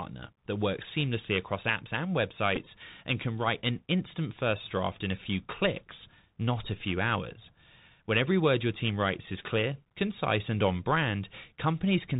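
Bluetooth CVSD headset codec damage runs through the whole of this speech clip. The band stops at 4 kHz, and a one-bit delta coder that fits a 64 kbps stream cannot follow fast high-frequency swings. S sounds come out scratchy, loud bright moments distort, and a granular hiss sits underneath. A Bluetooth headset packet repeated at 2.56 s, between "seamlessly across apps and" and "and can write an", causes a brief buzzy tick. About 7.5 ms of audio was lost, which fits two consecutive 3.75 ms packets, and the decoder filled the gap by replaying the previous packet's bits instead of new audio.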